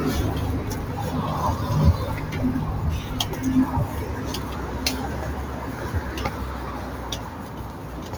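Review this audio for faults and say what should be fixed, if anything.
A noise suppressor applied to music or sounds runs throughout the clip. Treating sustained tones and ambience as noise, it pulls them down by roughly 5 dB between onsets while attacks pass, so the audio pumps and thins as tails sink. Bypass speech-oriented noise suppression for any non-speech source before capture or processing.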